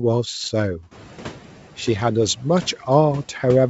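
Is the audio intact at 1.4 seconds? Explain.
No. Noise suppressor catching up runs from 0.91 to 1.47 s: room noise jumped about 16 dB, and the lagging estimate let it through before sinking it about 5 dB over 560 ms. It is one gradual fade after a step rise, not pumping with the speech.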